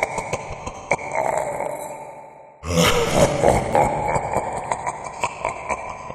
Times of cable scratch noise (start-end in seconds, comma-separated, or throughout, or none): none